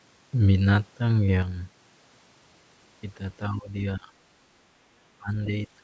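From 1.42 s to the end, the speech falls abruptly by about 6 dB, likely one channel dropping out before the mono sum. At 3.49–3.73 s, 3.97–4.15 s and 5.19–5.31 s, the speech dips by roughly 10 to 20 dB in short bursts, likely speech suppressed in double talk by the echo canceller.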